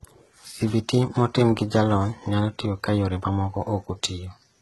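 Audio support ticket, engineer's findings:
Heavy coding damage on the speech throughout, nothing above 11.8 kHz. Likely HE-AAC compression around 16 kbps, with the treble rebuilt from copied lower bands rather than the original.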